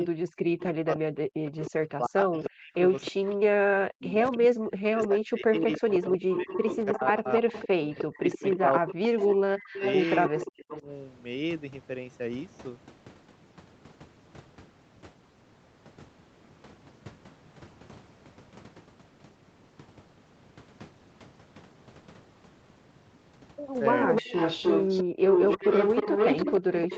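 From 0.0 to 10.88 s the speech dips and cuts out in pieces, sometimes very deeply, over about seven seconds in total. This is speech suppressed in double talk: with both sides talking, the echo canceller likely turned down the wanted voice along with the echo. In the same stretch, a delayed copy of the speech trails about 308 ms behind, around 15 dB below it from 1.6 to 3.35 s and around 10 dB below from 4.34 to 10.81 s. This is echo leak, likely from a loudspeaker whose echo canceller let part of the playback through.

From 23.91 s to the end the 308 ms echo returns at roughly the same level as the speech, as a leak likely from that loudspeaker's echo canceller. From 24.22 s the speech is again chopped and sharply suppressed under double talk.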